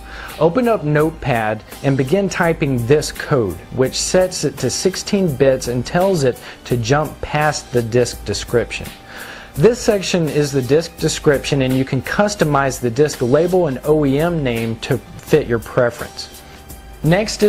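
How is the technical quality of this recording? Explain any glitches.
No glitches or technical faults can be heard anywhere.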